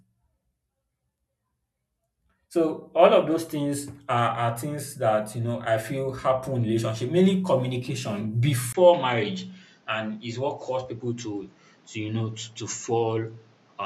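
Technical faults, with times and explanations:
8.73 to 13.86 s, input switched to a poorer device: Just after "in relationship mainly communication", a 20 ms gap appears. Then the speech loses everything above 7.6 kHz and sounds duller. A new noise floor sits well below the voice. The loudness stays about the same. This is likely a change of microphone.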